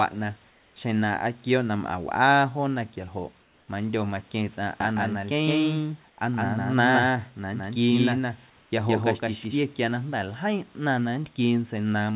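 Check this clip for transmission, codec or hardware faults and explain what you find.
Two kinds of fault appear in this speech, which comes through a narrowband call path that carries nothing above 4 kHz.

Comfort noise in place of the background, at 0.50–0.76 s, 3.42–3.68 s and 6.10–6.18 s. The likely cause is discontinuous transmission: the sender stops sending during pauses, and the receiver fills the gap with synthetic noise. The room's textured background gives way to flat, featureless noise about 2, 3 and 4 dB quieter.

Doubled audio track, from 4.80 to 9.60 s. A second full-band copy of the sound, roughly as loud as the original, trails it by about 150 ms, likely picked up a second time by a slower capture path. It has no decay or room colour, so it sounds like a dry slapback that switches on and off abruptly.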